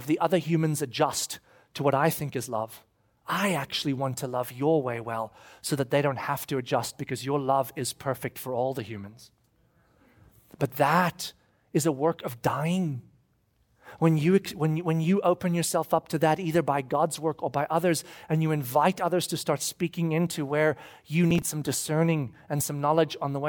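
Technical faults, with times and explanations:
21.31–21.49 s, processor overload crackle: a brief gritty tearing burst as several buffers of a few milliseconds each missed their deadlines again and again, replaying stale audio.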